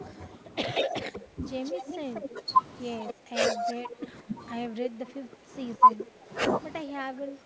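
From 0.0 to 7.46 s the talker's level repeatedly sags, dropping by around 15 dB at its deepest, with the top end thinning and parts breaking up. This is speech suppressed in double talk, likely because the echo canceller attenuated the near talker along with the far-end echo it couldn't separate.

An echo leak runs from 0.74 to 4.08 s: a delayed copy of the voice, about 186 ms behind and roughly 10 dB below it, trails the speech. A second, brief scrap comes at 5.9 s, about 196 ms late and some 20 dB down. Both are likely loudspeaker pickup that the far side's echo canceller failed to remove.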